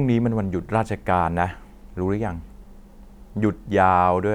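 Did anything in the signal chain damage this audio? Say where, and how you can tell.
No, nothing in the signal chain damaged this speech.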